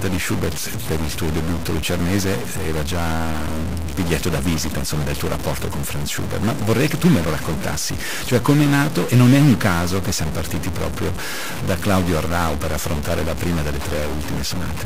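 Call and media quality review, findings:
Stuck bit, whole clip: one data bit likely held at a fixed level by a faulty line or converter. Distortion throughout; quiet passages filled with hiss.

Overlapping chunks, 14.38 s: chunk boundary (5 s chunks) restarts early, replaying about 7 ms of audio. Audible as a brief click or stutter at the join.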